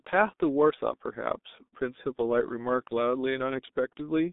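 Throughout, the speech carries heavy G.723.1 codec damage. Its coarse, slowly updated voice model, consistent with about 6.3 kbit/s, leaves the sound muffled and hoarse, with smeared consonants. A spectrogram shows energy confined to 200 Hz to 3.7 kHz, blank above 3.8 kHz.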